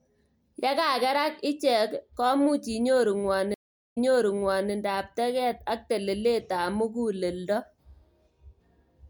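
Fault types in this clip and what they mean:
stream reconnect: the connection dropped, and the player reconnected and started a new decoder mid-stream, so at 3.54 s the speech cuts to silence for 0.37 s, then resumes 0.81 s earlier than where it stopped, repeating that stretch of speech.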